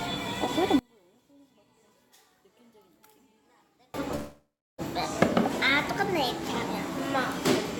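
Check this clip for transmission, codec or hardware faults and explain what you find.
Two faults are audible.

From 0.79 to 3.94 s the sound nearly vanishes, dropping by about 33 dB. This is the signature of one channel inverted, likely a stereo channel with reversed polarity. When the two channels are summed to mono, whatever they share cancels. Only their difference survives. Here that difference is small, so what remains is a faint trace of the sound.

From 4.15 to 4.81 s there is a call audio freeze, likely caused by delayed packets that emptied the jitter buffer. The receiver stretched the last sound to cover the wait. That fill lasts about 630 ms and includes roughly 340 ms of silence. When the audio resumes it picks up where it stopped, so nothing is lost. Everything afterwards simply runs about 630 ms late.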